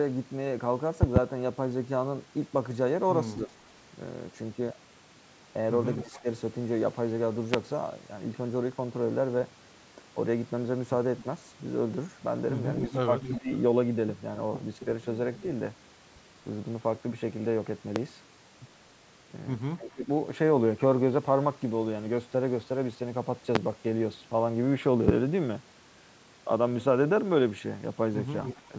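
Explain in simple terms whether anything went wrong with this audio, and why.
A loud pop, likely a brief electrical spike from a plug, switch or driver glitch, sounds as a double pop at 1.0 to 1.2 s and single pops at 7.5, 18.0, 23.6 and 25.1 s.

Speech suppressed in double talk happens when both sides talk at once. The echo canceller, likely unable to separate them, briefly dips the voice between 3.5 and 6.3 s, at 13.3 to 13.5 s, at 19.8 to 20.1 s and at 28.7 s.

An echo leak, likely from a loudspeaker echo the canceller missed, returns a quieter copy of the voice about a quarter-second late at 6.0 to 6.2 s, 11.2 to 15.4 s and 28.4 to 28.6 s.

The call's microphone processing limits the sound to 8 kHz and below.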